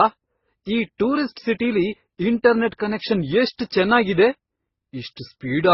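It's a speech clip with transcoding between lossy codecs smeared across the whole thing: nothing above about 5.7 kHz, plus two different flavours of artefact stacked together. That likely comes from a low-rate MP3, around 16 kbit/s, re-encoded to Opus at roughly 24 kbit/s.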